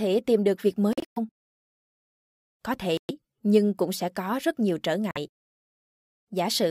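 Bluetooth dropouts cut the speech at 0.93–1.18 s after "tìm được việc", as broken gaps totalling about 186 ms; at 2.97–3.11 s before "nhưng cũng sẽ có"; and at 5.11–5.18 s after "có rất nhiều trở". Each is a silence with abrupt or briefly faded edges, likely from wireless packets arriving late and being dropped. The speech then resumes further on, as if it had kept playing.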